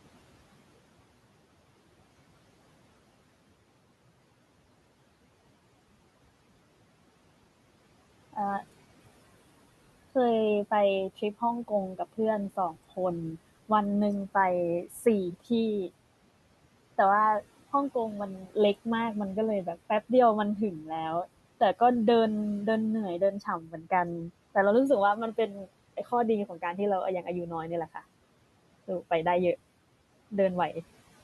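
Three short stretches of speech turn faint and swallowed, at 14.86 to 15.06 s, 23.41 to 23.91 s and 25.37 to 25.68 s, dropping by about 10, 11 and 12 dB. This is speech cut by the noise suppressor, which mistook quiet speech for room noise and turned it down.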